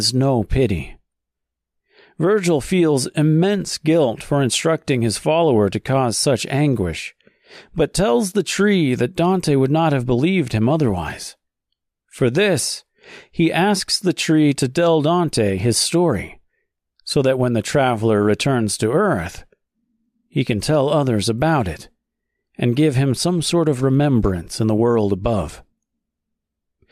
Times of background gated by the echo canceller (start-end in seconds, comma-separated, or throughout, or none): none